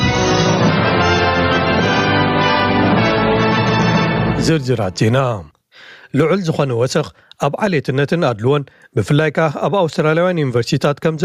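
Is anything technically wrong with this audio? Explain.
Yes. Gain pumping runs through the whole clip. The level swings by something like 15 dB, so everything sounds squashed. The likely cause is input gain set far too high, with a fast limiter clamping down on each peak.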